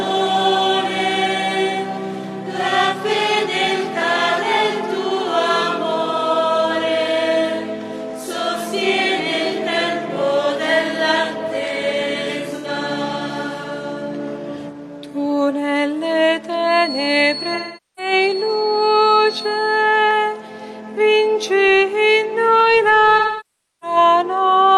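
The audio has two kinds of fault. AAC frame loss with concealment appears three times. At 12.55 to 12.67 s there is a brief smeared, noisy patch of about 85 ms, which fits two lost frames. At 17.54 to 18.12 s (about 430 ms) and 23.18 to 23.97 s (about 640 ms) the gaps are long enough that the patched-in sound decays toward silence and then fades back. In each case the decoder rebuilt the missing frames from the last good spectrum. On a spectrogram these spans show blurred, stretched blocks where fine detail smears into noise-like texture. In the waveform the envelope sags through the longer spans and recovers. From 16.58 to 19.91 s a thin, steady whistle at 4.4 kHz sits roughly 10 dB under the main sound and swells and fades slowly in level. This is likely a feedback whistle from a loudspeaker-to-microphone loop held just at the edge of feedback. On a spectrogram it appears as a single bright horizontal line at 4.4 kHz across those three seconds.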